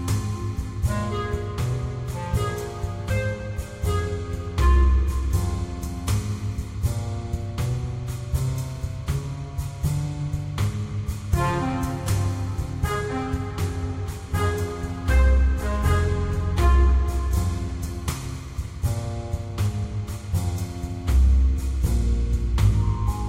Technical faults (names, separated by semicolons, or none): none